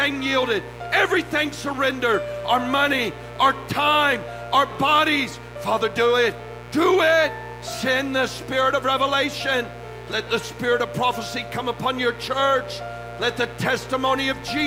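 Mains buzz runs from the start to the end, sitting around 15 dB below the sound itself. Sharp switching spikes from a dimmer, rectifier or poorly shielded line get into the signal twice per cycle of the 60 Hz supply, spreading harmonics of 60 Hz up into the kilohertz range. That gives a steady, raspy edge. A plain hum would be a smooth, low tone with little energy above the first few harmonics.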